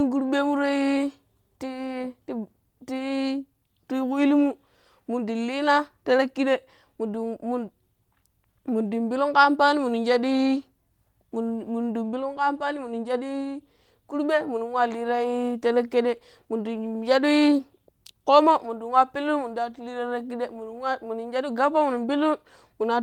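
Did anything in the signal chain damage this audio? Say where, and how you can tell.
No, nothing along the way from capture to playback has left any damage you can hear in this speech recording.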